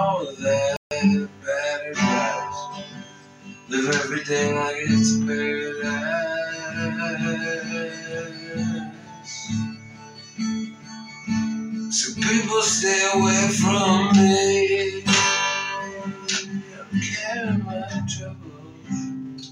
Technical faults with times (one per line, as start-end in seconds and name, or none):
0.76-0.91 playback stall